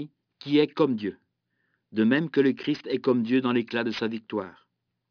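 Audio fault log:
Throughout: aliasing. The sibilants come out gritty and metallic, and the spectrum runs hard up to a ceiling near 5.5 kHz, which fits a drop from 48 kHz to 11 kHz with no low-pass filter applied first. Speech energy above that 5.5 kHz fold point has reflected back down to unrelated lower frequencies instead of being removed, leaving harsh, inharmonic components sitting roughly 25 dB below the speech itself.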